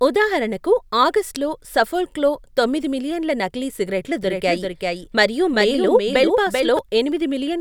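Speech recording with a doubled audio track from 4.23 to 6.79 s, just after "తొమ్మిది మిలియన్ల నకిలీ సిగరెట్లు": a dry, full-band copy trails around 400 ms behind, about 5 dB quieter, starting and stopping abruptly. The likely cause is a second, slower capture path being mixed in.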